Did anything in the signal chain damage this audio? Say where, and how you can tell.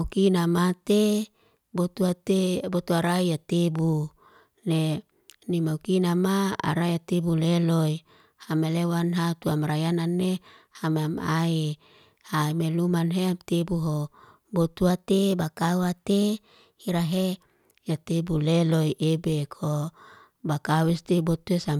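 Yes. Between 0.87 and 1.64 s and again between 14.90 and 17.38 s, the speech jumps about 5.75% faster and roughly a semitone higher (about 97 cents), then snaps back. This is a drift correction step, likely from clock-matching software at the buffer stage resampling in one jump to settle its fill level. On a spectrogram, every harmonic of the voice shifts upward together at the start of each span and drops back at its end, with sharp edges.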